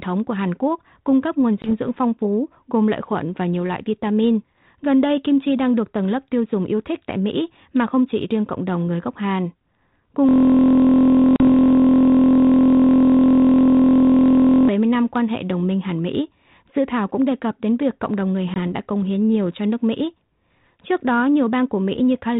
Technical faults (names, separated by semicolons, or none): packet loss on an ADPCM call; system hang loop